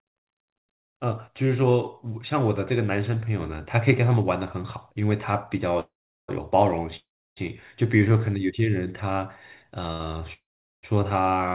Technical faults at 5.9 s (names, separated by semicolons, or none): call audio freeze